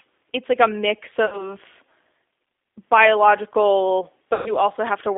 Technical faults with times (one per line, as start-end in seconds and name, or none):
0.00-5.17 G.729 codec
1.26-1.49 VoIP packet loss concealed by the speech codec
4.34-4.53 VoIP packet loss concealed by the speech codec